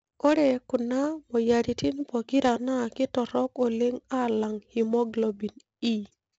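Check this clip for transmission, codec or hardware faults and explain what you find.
The clip has one codec fault, present throughout the speech. 4-bit ADPCM compression: each sample is coded as a coarse adaptive step from a prediction, leaving level-following gritty hiss, smeared attacks, and nothing above 7.8 kHz, consistent with a 16 kHz rate.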